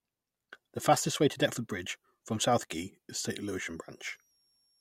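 From 3.39 s to the end of the speech, a switching supply whistle comes in. A switching power supply drops into an audible burst mode, or beats against another, and leaks a high tone wandering between about 5.5 and 5.7 kHz, sitting roughly 40 dB below the speech. Unlike a fixed interference tone or mains hum, its pitch slides within that band as the load on the supply shifts.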